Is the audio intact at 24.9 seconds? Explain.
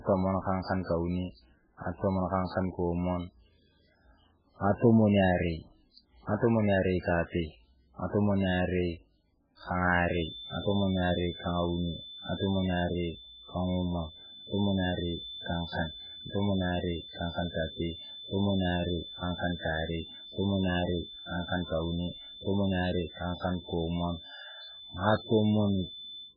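No. At 24.9 seconds the speech sounds watery and swirly, with metallic chirps on s sounds, smeared attacks, and nothing above 5.1 kHz. The damage is heavy and runs through the whole clip. Its likely cause is MP3 compression at a bitrate low enough to fit around 8 kbps: starved of bits, the encoder drops weak frequency lines that flicker on and off between frames, and it cuts the treble off at a fixed point.

A thin, steady whistle at 3.5 kHz also sits roughly 15 dB below the speech, swelling and fading slowly in level. It begins at 10.04 s and continues to the end, so it covers this moment too. This is likely a feedback whistle: the loudspeaker-to-microphone loop is poised just short of feedback, so one frequency keeps ringing quietly without ever building into a howl.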